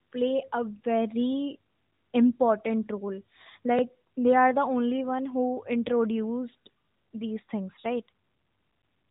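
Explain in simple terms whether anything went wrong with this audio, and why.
Yes, one thing went wrong. At about 3.79 to 3.81 s there is a tiny stutter caused by overlapping chunks. The audio was handled in pieces, and the next piece began slightly before the previous one finished, so about 21 ms of sound plays twice at that join. Unlike a dropout, nothing goes missing; a sliver is doubled. The join falls about 4 seconds in, which fits pieces of that length. The phone-style narrowband sound, with nothing above about 3.8 kHz, comes from the mobile codec working as designed.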